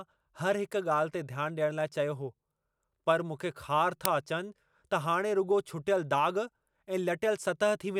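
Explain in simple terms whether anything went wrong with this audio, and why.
At 4.05 s an uninitialised buffer was played: the system sent leftover memory instead of audio, causing a split-second loud crack that fits a 128-sample block.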